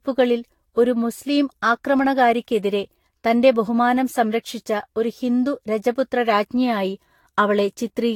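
Right through the speech there's a swirly, hollow smear, attacks blurring and nothing above 19 kHz. That's generation loss, likely from roughly seven Vorbis passes, each requantising on a fresh frame grid so holes stack up. It's worse than a single pass at around 70 kbit/s would sound.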